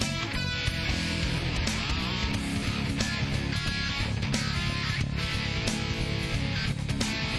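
At 2.31 s and again at 5.94 s there is a single sharp click, a thin vertical line across the spectrum. Each is likely dropped samples: a handful of samples missing from the stream, so the waveform jumps abruptly to a later value.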